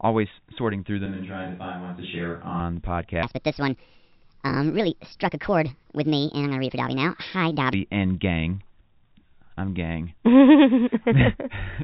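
From 1.06 to 2.6 s the speech suddenly goes roomy and hollow, loses bass, drops about 5 dB and picks up room noise roughly 30 dB under it: a switch to a distant microphone, likely the close mic dropping out, before it snaps back. Then from 3.23 to 7.73 s there's a section at the wrong speed, running 1.47 times too fast, so the speech turns high and hurried, up about seven semitones, likely from being fitted to the wrong clock. All of it comes through the narrow telephone band of G.711 coding, with nothing above 4 kHz.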